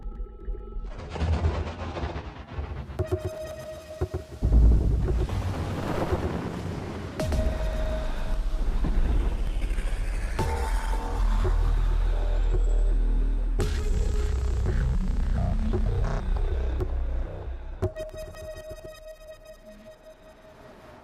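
From the start to 8.34 s, a doubled audio track trails about 150 ms behind, a few dB down, likely a second capture path; unlike echo, it never decays and then cuts off abruptly.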